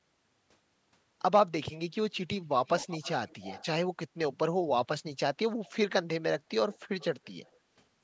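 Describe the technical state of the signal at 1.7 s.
At 1.7 s the speech is intact, with no fault present, only the normal call microphone processing and its nothing above 8 kHz band limit.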